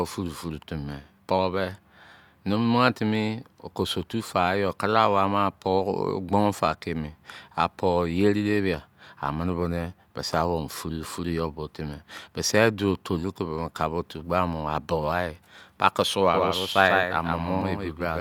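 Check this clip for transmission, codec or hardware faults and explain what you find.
Two faults appear near the end of the speech.

Doubled audio track, from 16.34 s to the end: a second copy, roughly 150 ms late and about 5 dB quieter, enters abruptly, likely captured again by a slower path. It sounds like a dry, flat echo.

Overlap between stream segments, at 17.62 s: overlapping segment timestamps made the player discard a short stretch, which fits 2-second segments. The waveform jumps, heard as a tiny skip.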